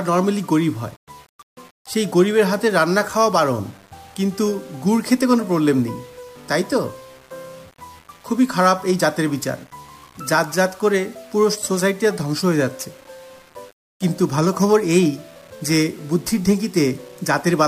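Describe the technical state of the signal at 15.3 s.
Quantization distortion sits on the sound at 15.3 s, and it runs through the whole clip. The fault is low bit depth without dither. The audio was likely rounded to only 7 bits with no dither added first. With so few steps, the rounding error tracks the waveform instead of acting as steady hiss. Quiet passages turn gritty and coarse. The error sits around 30 dB below the signal.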